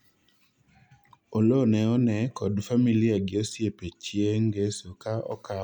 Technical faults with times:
none

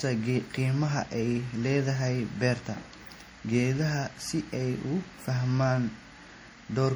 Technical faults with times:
0.00-6.96 transcoding between lossy codecs

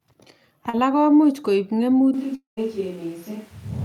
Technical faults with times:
0.69-0.75 short concealed packet loss
2.14-3.84 switch to a distant microphone
2.35-2.59 long network dropout

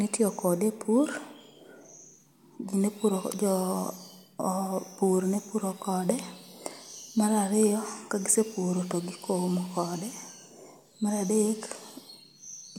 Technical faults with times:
none

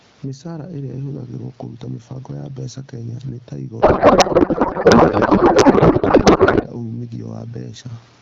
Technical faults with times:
0.00-8.22 gain pumping
3.81-6.65 codec payload misread

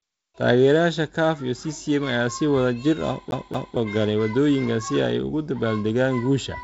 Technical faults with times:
3.31-3.77 CD stuck on one turn

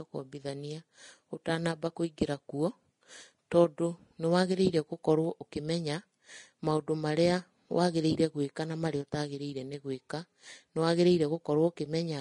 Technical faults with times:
0.00-12.21 Vorbis compression

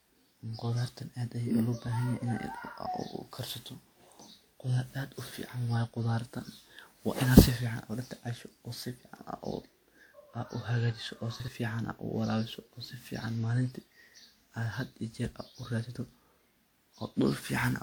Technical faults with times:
0.00-17.82 generation loss
11.40-11.48 chunks out of order

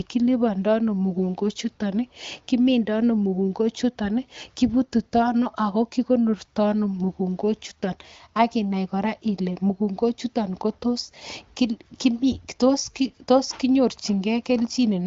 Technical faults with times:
none

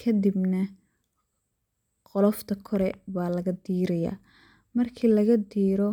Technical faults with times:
none

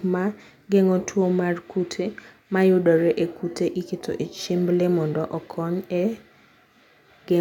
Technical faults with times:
none

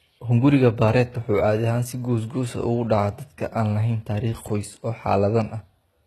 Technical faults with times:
0.00-6.06 HE-AAC compression

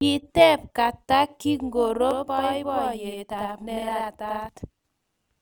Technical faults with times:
0.00-5.41 overlap-add ripple
2.11-4.49 channel delay (doubling)

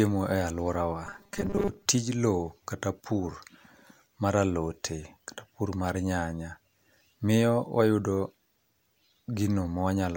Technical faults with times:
1.07-1.86 robotic sound from repeated short buffers

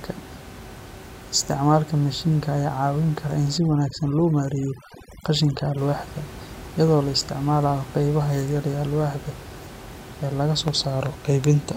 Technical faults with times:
3.58-5.78 overdone noise removal

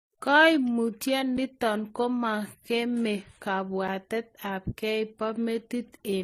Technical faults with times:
0.00-6.24 transcoding between lossy codecs
1.37 gap between chunks
3.88 gap between chunks

